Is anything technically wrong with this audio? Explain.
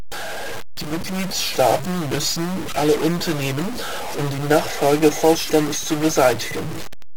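Yes. Stuck bit throughout: a fairly high data bit, around -25 dBFS in weight, is likely frozen, adding harsh, buzzy distortion to speech and filling pauses with noise.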